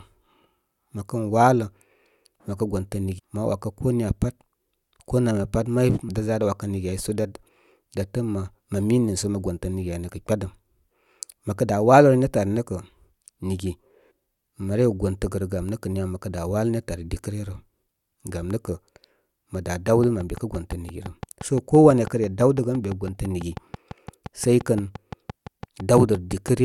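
A speech recording marred by three brief glitches: just after "məkə gontə" at 3.18 s, then at 6.08 s and 14.1 s. This is damaged data in a compressed stream: corrupted bytes made the decoder misread frames, lose sync and jump to the next header. From 19.88 s to 26.49 s a regular ticking runs over everything, pauses included, at 5.9 clicks per second, some forty in all, peaking around 5 dB above the speech. This train of clicks likely comes from interference from nearby equipment or a faulty connection or power supply injecting repeated pulses.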